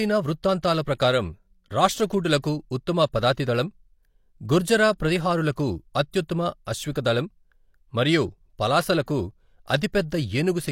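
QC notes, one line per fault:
6.65 s, pre-echo: a brief hiss of about 18 ms arrives just ahead of a sharp speech onset, which sounds softened. The codec's quantisation noise, sized for the loud attack late in its transform block, has spread back into the quiet moment before it.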